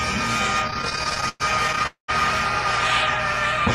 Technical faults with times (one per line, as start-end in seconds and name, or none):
0.67-1.87 repeated stalls (stutter)
1.87-2.10 call audio freeze